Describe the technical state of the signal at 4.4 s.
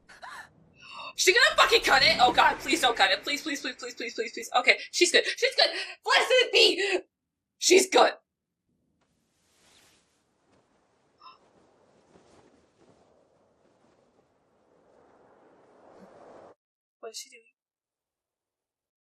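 At 4.4 s, from about 4.40 to 4.47 s, you get a short burst of DAB burbling: brief blips of noise. Bit errors have slipped past the error correction and corrupted sub-band samples, putting short bursts of noise into single bands. Around five MP2 frames are hit, with an error rate of a small fraction of a percent.

Under that, the whole clip sounds dull and plainly gurgly and granular, with upper bands thinned out or flickering. That's likely MP2 compression at around 80 kbps, where too few bits get shared across the 32 sub-bands.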